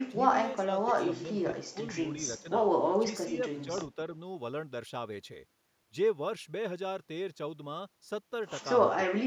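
Speech suppressed in double talk hits at 0.07–0.19 s, 0.56–1.46 s, 1.72–1.78 s, 2.40–2.47 s, 2.97–3.07 s and 9.08–9.18 s. Each time the voice dips by roughly 10 to 15 dB, likely because an echo canceller mistook it for loudspeaker echo while the far side spoke. Unlike packet-loss dropouts, it is a partial, ducked loss rather than hard silence or glitches.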